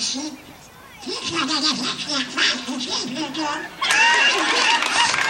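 Nothing in this audio stands out as a technical fault at any point, so there's really nothing here to flag.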